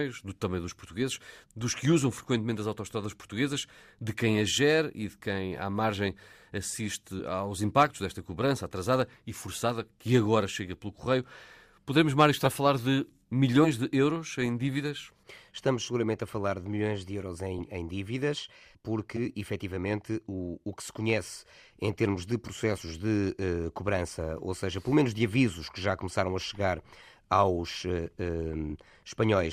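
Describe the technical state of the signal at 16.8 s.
At 16.8 s the speech signal is intact, with no dropout, clipping, distortion or other technical fault.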